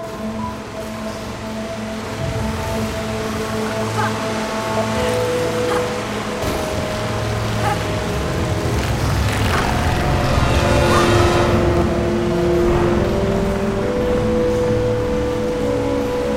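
Channel delay (doubling) runs through the whole clip. One channel arrives about 46 ms late, which fits a 2048-sample buffer, and both are summed to mono. The late copy stands apart at equal level. Every sound is followed by a doubling or slap echo.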